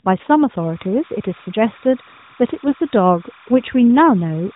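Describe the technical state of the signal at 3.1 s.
Timecode bleed is present at 3.1 s. It runs from 0.57 s to the end of the clip. Linear timecode at 30 frames per second is leaking in from an adjacent line. Its square wave flips between roughly 1 kHz and 2 kHz, about 25 dB below the speech, and sounds like a steady chirping warble behind the voice.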